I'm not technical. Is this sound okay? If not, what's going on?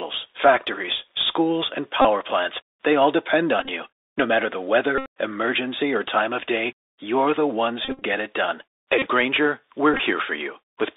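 No. The whole recording has passed through a Bluetooth CVSD headset codec, the basic voice link that wireless headsets use for calls. It keeps only a narrow slice of the sound, roughly 300 Hz to 3.7 kHz, so the speech sounds thin and phone-like. This codec tracks the sound by nudging it up or down in small adaptive steps. Sharp, loud high sounds outrun those steps, so s sounds turn scratchy, and a grainy hiss sits underneath.

There are also six moments where a Bluetooth headset packet was repeated. The wireless link dropped bits of sound, and the headset filled each gap by replaying the last good piece, which repeats every 3.75 ms. You hear this as a short buzzy stutter near 267 Hz:

2.02 to 2.06 s, between "factories schools and" and "plants they all depend"
3.60 to 3.69 s, in broken patches
4.98 to 5.07 s
7.85 to 8.03 s, the worst one, between "day you're the ones" and "it done"
8.99 to 9.08 s, just after "it done"
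9.94 to 10.00 s, in short patches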